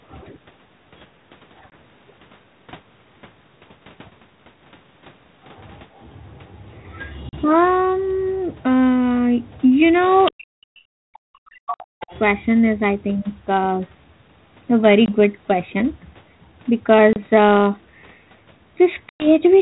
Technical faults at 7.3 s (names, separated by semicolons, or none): packet loss on an ADPCM call